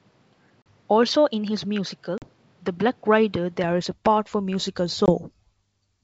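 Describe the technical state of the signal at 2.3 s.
At 2.3 s you're right at the tail of an ADPCM packet-loss hole, from 2.18 to 2.30 s. About 40 ms went missing, roughly a couple of packets, and got filled with hard-edged silence. Because the decoder's predictor and step size lost track of the sender's, the speech comes back slightly off and takes a few tens of milliseconds to settle.

That moment also sits inside a stretch from the start to 3.64 s that sounds like the input switched to a poorer device, likely a different mic or headset profile. It's duller, with nothing above about 6.3 kHz, around 5 dB quieter, and carries its own noise floor about 40 dB down. It clears just before "is a part for".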